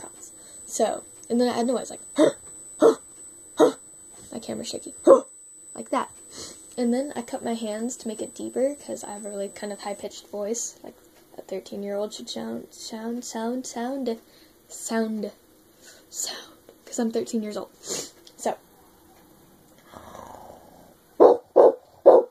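From 0.0 to 10.03 s, USB whine sits under the sound: fixed tones at 8 kHz, strongest at 16 kHz, fairly loud. Microframe current draw leaks through power or ground.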